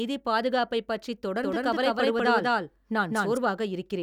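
From 1.44 s to 3.38 s the speech carries a doubled audio track: a second full-band copy runs about a fifth of a second behind and at roughly the same level as the original, so every syllable is heard twice. The likely cause is the signal being captured again through a slower path. Unlike an echo or reverb, the repeat has no decay or room colour, and it cuts in and out abruptly at those two points.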